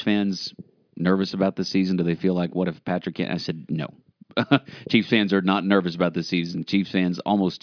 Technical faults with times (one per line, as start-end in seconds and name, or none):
none